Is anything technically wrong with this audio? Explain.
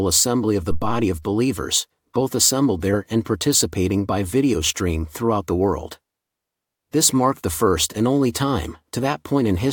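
Yes. A phantom power thump runs from 0.71 to 1.13 s, just after "of the". Switching the supply on a live input sends a sudden DC step through the coupling capacitors, and the input stage passes that step on as a low-frequency pulse. In this speech clip it is a deep, dull thump peaking at about -13 dBFS, which dies away within roughly 95 ms.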